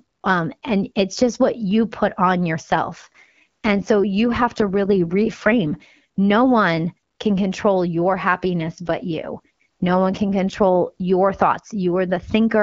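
From 2.63 to 5.86 s and again from 8.93 to 11.10 s the speech turns rougher and more synthetic. These are AMR rate drops, consistent with the codec falling from 12.65 to 8.85 kbit/s.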